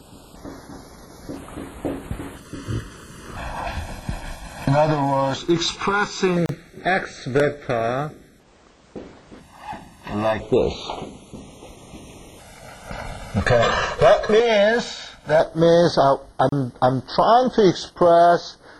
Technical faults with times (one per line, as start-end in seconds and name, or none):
6.46-6.49 gap at a join of encoded pieces
16.49-16.52 gap at a join of encoded pieces